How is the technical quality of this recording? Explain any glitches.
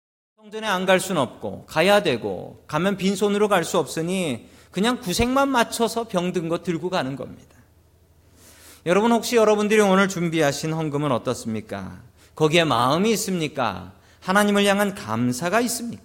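No glitches in this speech recording; the only event is a smooth fade-in, as an editor would apply, rising from about half a second and reaching full level at 1.08 s with no click or hard edge.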